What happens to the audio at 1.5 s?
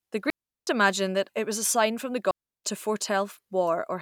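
Nothing goes wrong at 1.5 s; the speech carries on intact through that moment, with no dropout, click or distortion.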